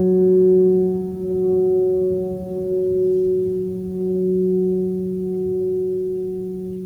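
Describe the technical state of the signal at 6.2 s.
At 6.2 s the music plays through intact, with no dropout, distortion or other fault in the signal.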